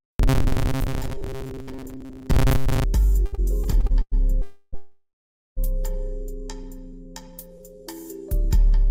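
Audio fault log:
0.01–2.84 s, robotic sound from repeated short buffers: A rigid metallic buzz near 134 Hz. About half the audio is likely replaced by repeats of a 7.5 ms buffer.
3.25–4.14 s, repeated stalls (stutter): Seven brief holds of the last sound, the longest 100 ms, add 282 ms of filler. The audio drags and stutters, but nothing is lost.
4.42–5.59 s, call audio freeze: The sound hangs for 310 ms, then 820 ms, fading to 440 ms of silence. This is likely late packets draining the buffer, and playback resumes without loss.
6.63–7.81 s, jitter buffer slow-down: Repeated pitch periods add 79 ms, so playback runs at 94% speed with unchanged pitch and drawn-out sounds.
7.57–7.62 s, short stall from a late packet: The last sound is stretched by 23 ms until the packet arrives, so it is held too long, without loss.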